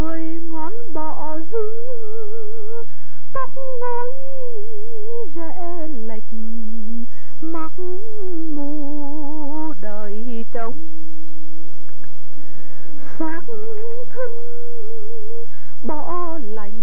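From 0 to 7.09 s, imaging from linear upsampling: straight-line interpolation, fitting a 16 kHz source raised to 44.1 kHz, leaves a very faint 8 to 16 kHz mirrored shimmer above a dulled top, not aliasing's inharmonic tones.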